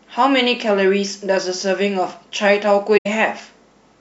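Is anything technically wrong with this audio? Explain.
Yes. Between 2.97 and 3.07 s the speech drops out in an instance of AAC frame loss with muting. The decoder received no data for that stretch and substituted silence, zeroing the spectrum. The gap of roughly 85 ms fits about four lost AAC frames. Because AAC reconstructs audio from overlapping windows, the sound fades down into the gap and fades back up after it instead of being cut abruptly, leaving a short, soft-edged hole in the speech.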